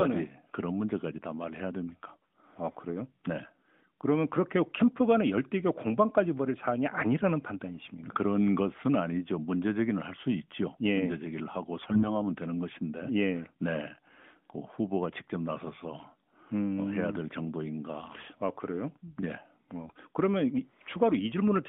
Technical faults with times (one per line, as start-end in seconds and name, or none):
11.76-12.05 AMR bit errors
19.86-19.93 AMR bit errors